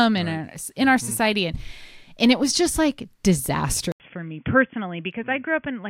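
At 3.92 s an 80 ms silence, then speech returns narrowband to the end: nothing above 3.4 kHz, about 10 dB quieter, with new noise about 50 dB down. The gap and fresh noise, unlike a plain filter, point to the input likely switching to a poorer device.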